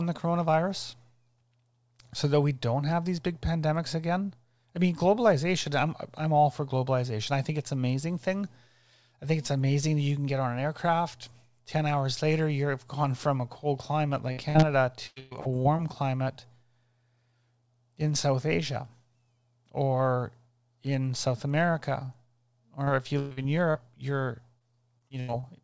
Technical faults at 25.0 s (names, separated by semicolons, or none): repeated packet loss (robotic sound)